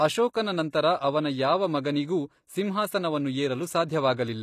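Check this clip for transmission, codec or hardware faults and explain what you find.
Two codec faults appear in this speech clip: a constant compression coloration and two brief pre-echoes.

Throughout, the treble sounds bright but synthetic, with gritty, lispy s sounds and nothing above 15 kHz. This is likely HE-AAC compression at a low rate, around 24 kbps. The upper band is rebuilt from copied lower bands, so harmonics misalign. Plain low-pass filtering would sound dull rather than gritty.

Pre-echo occurs at 0.33 s (about 10 ms) and from 0.70 to 0.73 s, just before "ಅವನ ಯಾವ ಮಗನಿಗೂ ಸಿಂಹಾಸನವನ್ನು". Block-spread quantisation noise leaks ahead of each attack as a short hiss. Unlike a click, it smears backward into the quiet before the attack.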